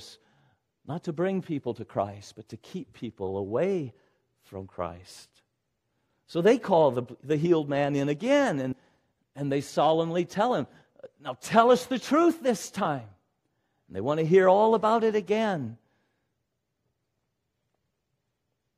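A jump at 8.71 to 8.73 s after "healed man in again" and at 12.84 s after "us the truth this" marks compressed frames skipped. The decoder dropped about four 23.2 ms frames, then one, so the speech jumps ahead.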